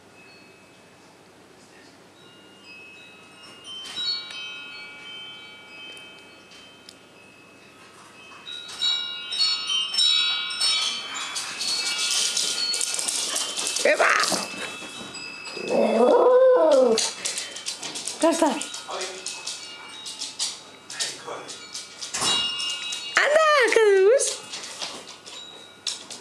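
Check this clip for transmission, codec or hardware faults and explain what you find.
No transmission, codec or hardware faults can be heard.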